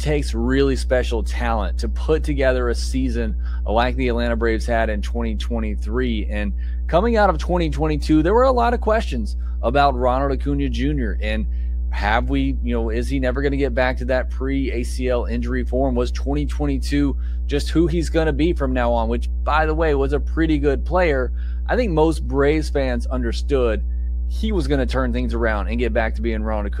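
A ground loop or a nearby transformer has coupled the 60 Hz power line into the signal, so mains hum runs for the whole speech clip, a steady low tone at 60 Hz sitting at roughly the same level as the speech itself.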